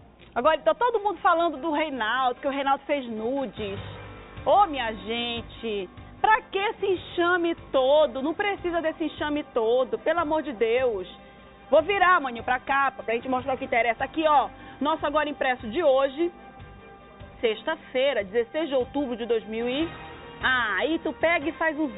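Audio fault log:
Nothing here needs flagging; the audio just runs along with nothing that catches the ear as a problem.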